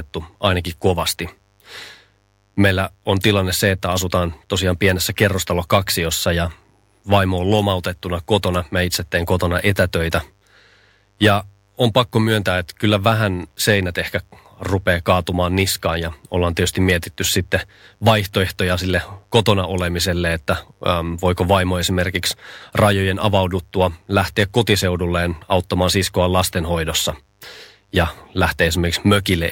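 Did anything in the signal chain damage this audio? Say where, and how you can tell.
Yes. A mains buzz runs under the speech for the whole clip, entering at the analogue wiring stage. It sits roughly 40 dB below the speech, a raspy 50 Hz buzz whose harmonics climb into the kilohertz range. Sharp switching spikes, perhaps from a dimmer, a rectifier or a missing shield, couple in twice per mains cycle. A smooth hum would stay near the fundamental; the rasp and the high harmonics mark it as buzz.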